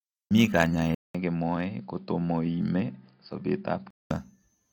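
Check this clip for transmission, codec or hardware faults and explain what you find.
One fault is present. From 0.95 s to 4.10 s the speech turns dull and boxy after a 200 ms gap. Nothing above 5 kHz, a little quieter, a faint new noise floor, then full clarity returns. It is likely an input switched to a poorer device. Unlike a codec bandwidth drop, this brings its own level shift and background noise.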